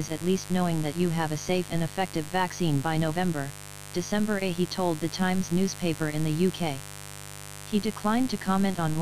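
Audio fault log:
Throughout: mains buzz. A steady, raspy buzz sits under the audio at roughly 15 dB below the signal. Sharp switching spikes arrive twice per 50 Hz cycle, which spreads harmonics of 50 Hz well up into the kilohertz range. That spread gives the buzz its rough, edgy texture rather than a pure hum.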